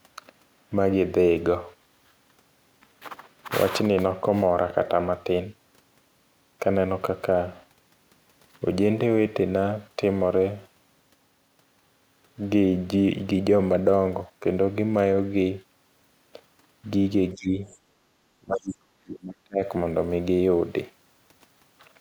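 An echo canceller most likely lost track of which sound was its own talker and which was loudspeaker echo while both sides spoke at once, so it pulled the whole signal down. That speech suppressed in double talk shows first from 17.34 to 17.67 s, where the speech dips by roughly 20 dB. It returns more severely from 18.4 to 19.6 s, dropping by around 35 dB for about a second.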